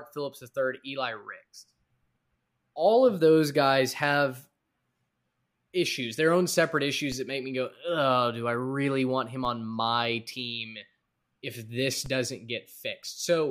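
At 7.12 s, 9.45 s and 12.06 s, a DC step shifts the waveform's zero line, by about -31, -31 and -29 dBFS. Each jump is a brief low thump. The offset then drains away through a 20 Hz high-pass. The speech continues unaffected.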